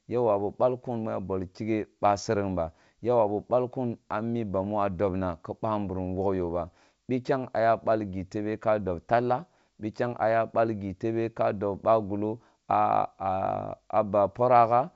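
Nothing stood out on listening to this speech clip, which comes through the G.722 wideband telephone path at 64 kbit/s with speech carried up to around 7 kHz.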